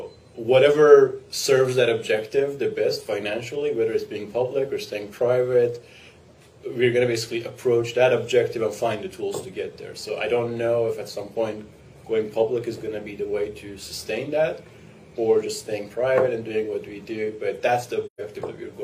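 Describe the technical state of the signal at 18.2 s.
At 18.2 s you're right at the tail of an AAC frame loss with muting, running from 18.06 to 18.21 s. The decoder zeroed the missing frames, which fits about three lost frames (128 ms), and the overlapping windows fade the sound out and back in, leaving a soft-edged hole.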